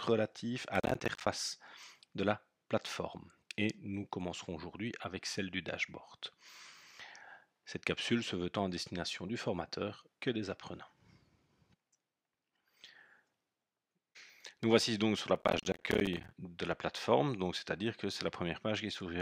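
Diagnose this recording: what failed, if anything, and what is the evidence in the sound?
The audio processing chain at the driver and buffer stage fell behind. The processor repeatedly failed to deliver its small buffers on time, and each missed one went out as a hard-edged gap of silence. This shows up as processor overload crackle, a burst of gritty tearing from about 0.75 to 1.27 s and a longer one from about 15.36 to 16.31 s. The rapid clicking texture fits short buffers of around 10 ms missing deadlines in quick succession.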